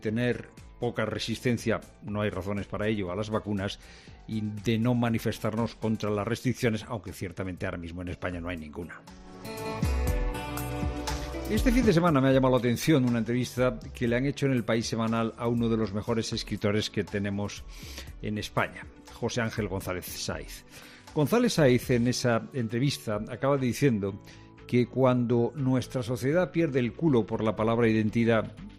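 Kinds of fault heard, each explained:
Nothing stood out on listening; the audio holds steady throughout, with no dropouts, glitches, distortion or other disturbances to point to.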